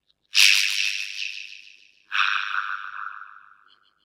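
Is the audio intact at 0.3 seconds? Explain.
No. At 0.3 seconds, as everywhere else in the clip, there's overlap-add ripple. The sound was chopped into windowed frames and stitched back with an overlap that doesn't add up to a steady gain, so the level dips and swells once per frame. Here the dips run about 60 dB deep at around a hundred times a second, which gives a metallic buzz with extra tones around each note, riding on everything.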